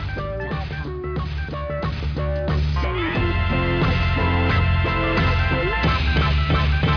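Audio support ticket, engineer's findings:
No audio faults found; no findings to report for this ticket.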